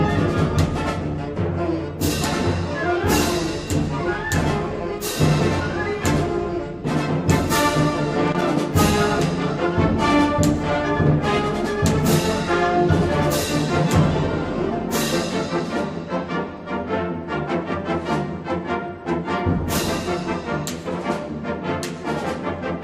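Around 8.28 to 8.42 s there's a short burst of loose connector crackle, roughly 140 ms of irregular scratchy noise. That's a worn or dirty contact flickering between connected and open as something shifts, chopping the signal.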